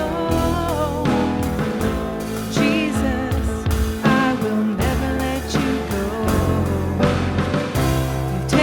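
No technical faults can be heard anywhere in this clip.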